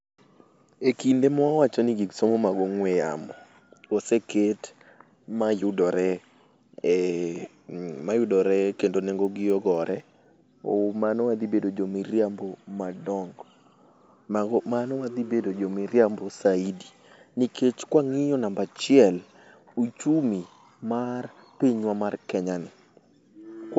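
From 8.75 s to 10.25 s a row of small ticks rides on the speech, repeating four times a second and heard only where there is signal. This is a resampler restarted on every block. The audio, which sounds like a 16 kHz to 48 kHz conversion, was converted in separate 250 ms pieces, so at each edge the filter lacked the real neighbouring samples and left a brief error, one tick per block boundary.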